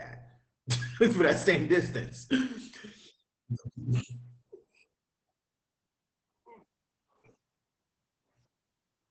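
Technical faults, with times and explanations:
Throughout, Opus voice compression: speech sounds muffled, hoarse and faintly robotic, with nothing above about 8.6 kHz, consistent with a low-rate SILK wideband coder coarsely coding excitation.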